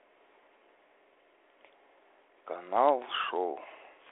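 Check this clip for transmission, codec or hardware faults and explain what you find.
No faults turn up in the speech, which carries the 300 Hz to 3.4 kHz telephone band and faint coding grain expected of G.726 ADPCM working normally at 32 kbit/s.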